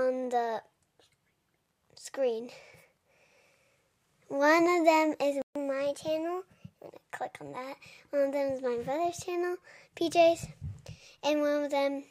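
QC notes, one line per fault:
5.42 to 5.55 s, playback stall: the sound just drops out mid-flow for about 136 ms, a clean gap of silence rather than a fade, and then picks up again. That kind of abrupt hole is what you get when the output has nothing to play, most likely because the player ran dry of data or its audio thread got held up for a moment before recovering.
5.55 to 6.92 s, catch-up at higher speed: right after the gap the audio runs fast, at 1.1x, and everything sits higher, roughly a semitone and a half up, for well over a second before settling back to normal. That's the player chewing through its backlog by resampling to win back the time it lost in the stall, and since resampling shifts speed and pitch together, you hear both rise.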